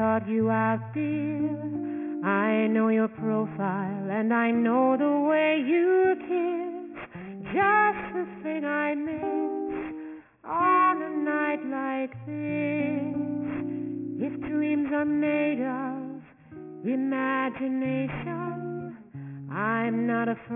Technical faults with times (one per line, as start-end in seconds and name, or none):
0.00-20.55 aliasing